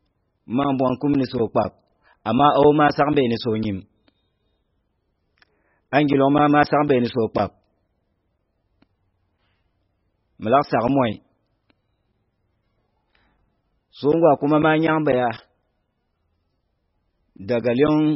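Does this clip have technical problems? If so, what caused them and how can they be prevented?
Yes. MP3 compression artefacts run throughout the speech. Nothing remains above 5.6 kHz, and weak frequency lines flicker between frames, giving heavy watery smearing. This fits a very low bitrate near 16 kbps, likely from MP3 encoding. Encoding at a much higher bitrate would prevent it.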